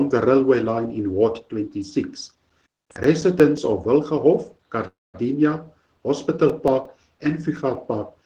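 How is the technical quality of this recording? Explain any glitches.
The recording has two kinds of fault: repeated CD scratch ticks in two runs and one call audio freeze.

CD scratch ticks run from 2.14 to 3.75 s and again from 6.14 to 7.75 s, ten ticks in each run at about six per second. A blemish on the disc defeats error correction once per revolution, and the player conceals the damaged samples. Each tick is a brief click or micro-dropout, up to about 10 ms in the first run and only a few milliseconds in the second.

Between 4.87 and 5.16 s there is a call audio freeze. The sound stalls into a decaying fill that drops to about 210 ms of silence, and then the audio resumes exactly where it stopped, nothing skipped, running about 263 ms later. The likely cause is delayed packets draining the receiver's jitter buffer.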